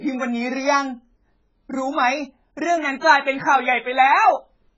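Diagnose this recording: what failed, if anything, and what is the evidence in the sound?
AAC compression, throughout the speech: nothing is heard above 7.6 kHz, and the sound is dull and smeared with a warbling, fizzy texture on sibilants. This is a codec-stage fault, likely heavy AAC-LC quantisation at a very low bitrate around 12 kbps.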